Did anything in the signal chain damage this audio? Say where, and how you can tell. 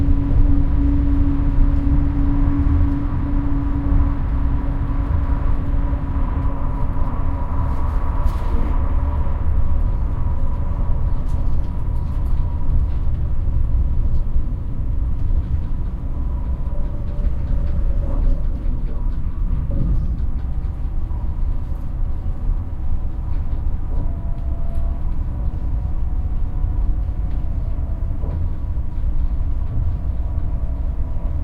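No, nothing in the signal chain damaged this audio.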